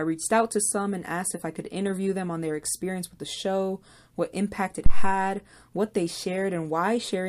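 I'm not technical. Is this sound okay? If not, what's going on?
No. At 4.86 s, microphone power was switched on or off on a live input, causing a phantom power thump: a deep, loud bump that fades away by 5.19 s.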